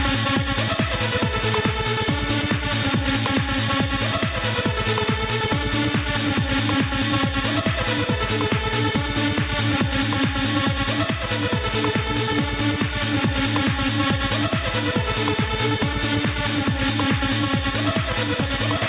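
Gain pumping runs through the whole clip: the gain ducks by around 5 dB under each loud sound, likely from gain set too high feeding a fast limiter. Unlike a noise gate, it never drops to silence. The band stops near 4 kHz, as expected on this narrowband call path.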